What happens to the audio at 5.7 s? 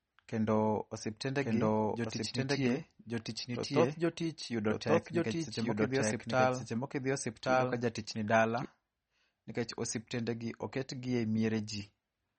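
At 5.7 s the sound is doubled: a second full-band copy runs about a second behind the original, at roughly the same level. This doubled audio track lasts from 1.41 s to 8.65 s. It likely comes from the same audio being mixed in twice out of step, such as a slower capture path or an overlapping edit. It has no reverb tail or room colouring. On a spectrogram the pattern repeats shifted by about a second. The waveform shows denser, overlapping energy, and both edges of the span start and stop abruptly.

The same moment also carries MP3 compression, which affects the whole clip. Nothing is present above 8.4 kHz, so the top end sounds dull. Weak frequency components flicker in and out, giving a watery, swirly texture with metallic chirps on s sounds and smeared attacks. The damage is plainly audible and likely comes from a low bitrate, around 32 kbps. On a spectrogram it appears as a flat ceiling at 8.4 kHz, with blotchy, patchy detail below it.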